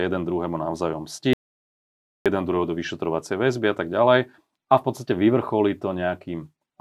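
An audio dropout to silence runs from 1.33 to 2.26 s in this speech, right after "jeden druhému navzájom". The speech cuts off mid-flow and about 0.92 s of silence follows, with no room tone beneath it, before the sound resumes on "jeden druhého do vyšetrovacej". The input was likely lost for that stretch, through a disconnected device, a failed link or an accidental mute, while recording carried on writing silence, so whatever was said then is gone.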